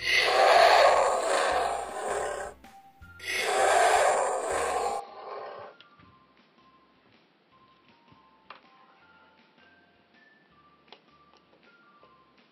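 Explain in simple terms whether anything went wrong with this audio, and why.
At 5.0 s the input likely switched to a poorer device, so the rest sounds duller and quieter, with new background noise, and no gap.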